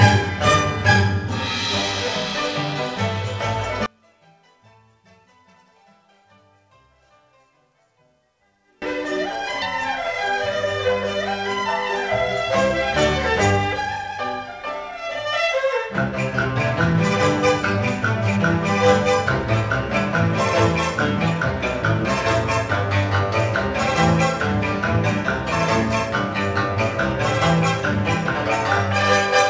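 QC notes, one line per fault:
3.86–8.82 s, one channel inverted: the level drops by about 33 dB and only a faint residue remains, which is likely one stereo channel with reversed polarity cancelling the shared content when summed to mono. Unlike a dropout, it is not silent, and unlike a gain dip, only the small mismatch between the channels is left.
9.62–9.64 s, skip ahead: playback jumps forward with no gap, losing about a second of audio, and the two sides are butted almost directly together. This is dropped audio while later audio was waiting, not a dropout, since nothing is silenced or concealed.
15.25–15.67 s and 17.74–18.40 s, jitter buffer speed-up: the audio runs at 112% and then 109% speed with unchanged pitch. Roughly 50 ms and 70 ms are shaved out in many small pitch-period cuts to reduce buffer delay. Unlike a skip ahead, nothing is lost at a single point.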